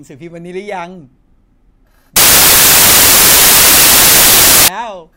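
From 2.16 s to 4.68 s the speech is swamped by loud, harsh, near-white noise. These are samples built from the wrong bytes: each value is assembled misaligned or byte-swapped, so its rapidly changing low bits dominate.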